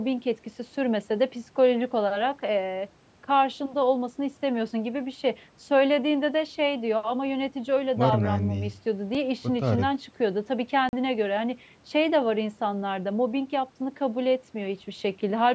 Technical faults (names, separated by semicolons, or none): block of digital silence